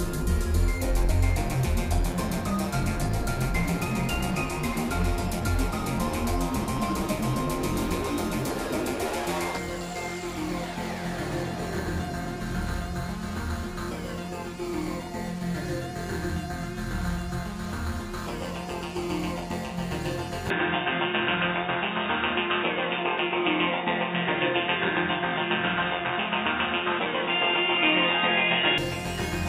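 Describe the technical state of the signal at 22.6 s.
At 22.6 s the sound is dull and boxy, with nothing above 3.8 kHz, a level shift of roughly 5 dB and a new noise floor some 35 dB down. This is likely an input switched to a poorer device, in effect from 20.50 s to 28.78 s with no gap at the changeover.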